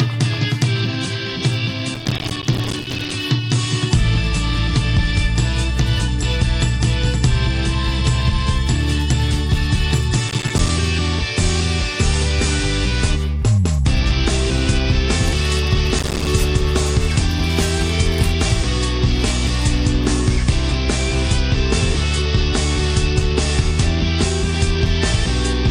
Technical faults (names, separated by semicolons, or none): processor overload crackle